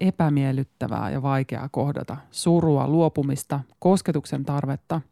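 No technical faults can be heard anywhere in the speech. Nothing in the signal calls for comment.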